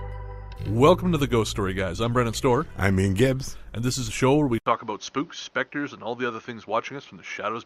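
Right around 4.58 s there's a brief gap, about 80 ms of silence, and after it the sound changes character for the rest of the clip. Nothing comes through above about 6.5 kHz, so it turns dull and a bit boxy, drops a few dB in level, and picks up a new, faint bed of background noise well under the signal. That's most likely the input switched to a poorer device partway through, swapping in a narrower-band microphone path.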